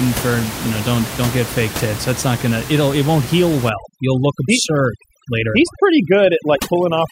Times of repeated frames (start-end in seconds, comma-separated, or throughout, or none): none